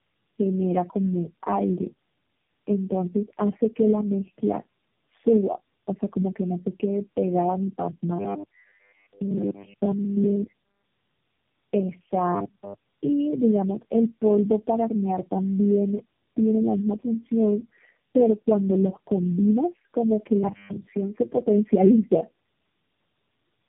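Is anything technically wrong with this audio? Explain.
Yes. Throughout, tandem speech coding applies four low-rate speech codecs in succession, AMR-NB, G.729A, G.729A, then AMR-NB again, with nothing above 3.7 kHz. The result is rougher and more warbly than one codec alone.

From 12.35 to 12.74 s there is robotic sound from repeated short buffers. A fixed 100 Hz metallic buzz replaces essentially all the audio, likely from a 10 ms buffer being replayed. Its rigid pitch sets it apart from codec warble.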